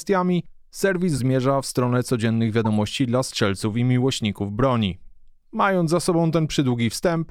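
Speech with two bursts of corrupt frames decoded: damaged compressed data was played anyway, putting energy at wrong frequencies as brief glitches at 1.16–1.20 s, before "w stronę codziennych", and 2.65–2.67 s, before "dla strzelców i miłośników".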